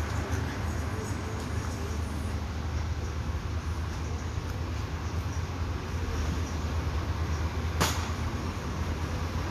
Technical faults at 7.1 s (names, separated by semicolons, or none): Vorbis compression